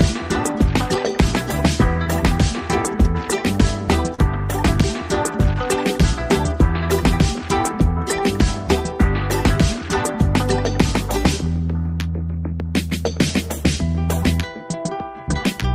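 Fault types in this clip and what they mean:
Short concealed packet loss: brief gaps of about 10 to 30 ms where audio never arrived and was patched by extending the preceding sound, near 0.94, 2.04–2.07, 4.15–4.19 and 12.90–12.92 s. The patches show as smeared, repeated-looking harmonics on a spectrogram and slight waveform discontinuities.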